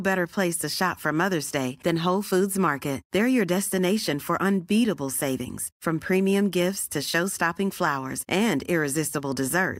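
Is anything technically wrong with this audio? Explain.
No, the speech signal shows no audible technical problems at any point in the clip.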